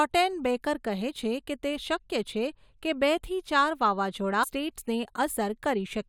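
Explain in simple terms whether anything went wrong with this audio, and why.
Something did go wrong in this speech clip. At 4.42 s, right after "કે બેથી ચાર વાવાઝોડા", the sound suddenly jumps forward with a small blip. This is likely a stream segment skipped: one piece of the stream failed to arrive, so playback moved on to the next piece.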